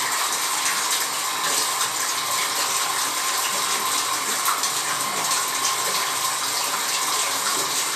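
The clip is a recording of sounds, and nothing is technically wrong with it.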